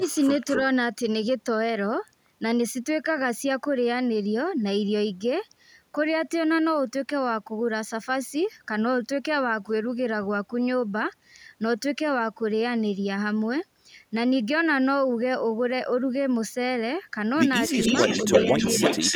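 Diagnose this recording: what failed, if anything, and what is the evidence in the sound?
Call processing failed: speech suppressed in double talk, likely the echo canceller ducking both sides, leaves 50 ms waveform notches at 0.0–0.05, 17.69–17.74 and 18.25–18.3 s, about 10, 20 and 10 dB deep.

Echo leak, also in call processing, likely from loudspeaker pickup the canceller missed: 260 ms delayed copies at 0.01–0.2 s (about −25 dB) and 0.51–0.62 s (about −5 dB), then a 306 ms copy at about equal level from 17.72 s onward. A spectrogram shows duplicated, time-shifted harmonic bands.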